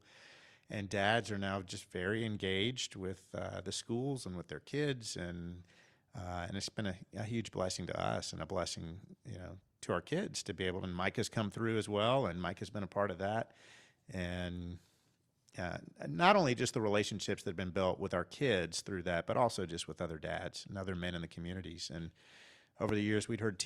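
Speech clip with one loud pop right near the end, 22.89 to 22.91 s, a single sharp hit about 15 dB above the speech, likely a voltage spike from a plug, switch or static.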